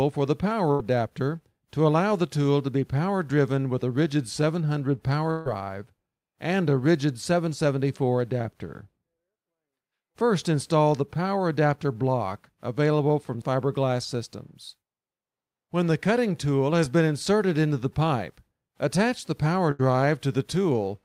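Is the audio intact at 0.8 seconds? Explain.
No. A burst of packet loss spans 0.71 to 0.81 s. About 80 ms of audio is missing, and the receiver stretches the last sound over a 77 ms gap and fades it. On a spectrogram this appears as frozen, fading bands, and the waveform jumps where the audio resumes.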